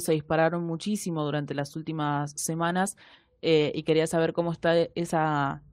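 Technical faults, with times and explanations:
No technical faults can be heard in this speech recording, and the signal stays steady throughout with nothing that points to a problem in how it was captured, processed or delivered.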